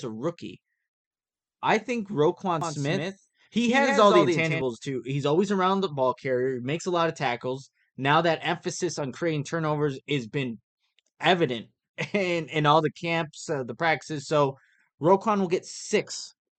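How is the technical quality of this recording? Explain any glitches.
One glitch stands out: from 2.61 to 4.61 s, a doubled audio track repeats the speech roughly 150 ms late, likely from a second, slower capture path. The copy, about 5 dB quieter and undecayed, sounds like a flat echo; the waveform shows duplicated, offset envelopes switching abruptly on and off.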